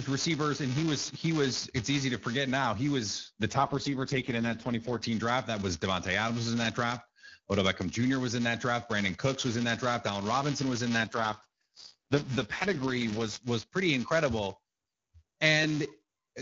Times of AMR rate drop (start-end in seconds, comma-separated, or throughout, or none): 3.49-5.04, 11.01-13.44